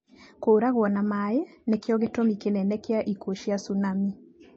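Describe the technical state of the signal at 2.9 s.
At 2.9 s the speech sounds watery and swirly, with a hard ceiling at 8 kHz and smeared consonant attacks, as it does across the whole clip. The likely cause is MP3 compression at a bitrate as low as 32 kbps, starving weak frequency lines.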